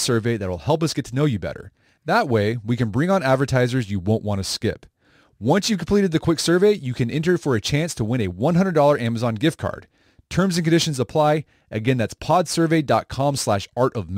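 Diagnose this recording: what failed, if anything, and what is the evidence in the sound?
A crude rate conversion failed at the sample-rate conversion stage: the speech was moved from 48 kHz to 44.1 kHz by simply keeping the nearest sample rather than filtering and resampling. The timing error repeats in a fixed pattern set by that ratio, adding inharmonic tones some 30 dB below the speech. Throughout the recording this is heard as a gritty fizz that rides on louder passages and brighter consonants.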